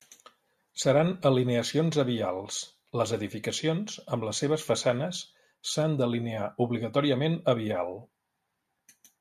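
Nothing technically wrong turns up anywhere in this bit of speech, so there's nothing to time or trace back to a cause.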